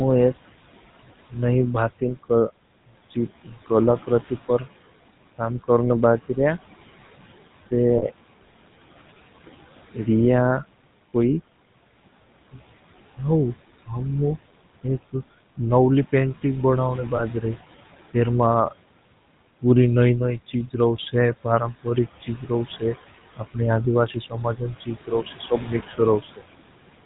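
From start to finish, noise suppressor artifacts are audible. The suppressor pulls the steady background down by about 16 dB in the gaps and lets it back up under the speech. The leftover noise rises and falls frame by frame. The room noise itself sits about 19 dB below the speech.

Throughout the clip, the GSM full-rate codec leaves a plainly audible buzzy, gravelly roughness. Its pulse-train excitation keeps only a coarse version of the voice source, and nothing survives above 4 kHz. The result is a dull, narrow band that fits the 13 kbps GSM full-rate codec.

Lost GSM frames occur at 7.98 to 8.03 s, 11.10 to 11.12 s and 17.16 to 17.21 s. The decoder fills each gap by repeating the last good frame, with the level falling from the second lost frame on, so the sound briefly freezes into a short metallic ring. The first gap fits two 20 ms frames and the others one each.

At 26.22 to 26.42 s comes speech cut by the noise suppressor. 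The suppressor treats part of the speech as noise and turns it down by up to about 17 dB over roughly a tenth of a second. That stretch sounds swallowed and faint.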